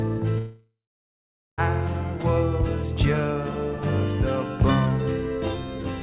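At 0.38 s the audio breaks off, and what follows is a long network dropout, likely caused by packets failing to arrive for over a second. The receiver stretches the last sound into a buzzy tail that fades within about 0.4 s, then leaves roughly 0.83 s of silence. On a waveform this shows as a decaying smear followed by a flat line. Sound returns at 1.61 s with about 1.2 s of material simply gone. Throughout, a spectrogram shows nothing above 4 kHz, which fits a narrowband G.711-style call codec.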